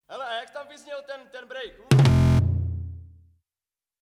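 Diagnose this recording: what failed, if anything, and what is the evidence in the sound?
A system hang loop at the driver or buffer stage: from 2.11 to 2.39 s, one 23.2 ms slice repeats twelve times as a steady 43.1 Hz buzz. This fits a 1024-sample buffer replayed during a freeze, and about a third of a second is lost. The waveform shows identical blocks, and the spectrogram shows lines 43 Hz apart.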